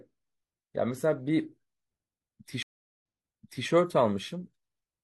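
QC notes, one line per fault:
2.62–3.66 s, stream reconnect: the connection drops and the audio goes silent for 0.40 s. A fresh decoder then picks up mid-stream, and playback resumes 0.64 s earlier than where it cut off, so a stretch of speech repeats because the server resent buffered data.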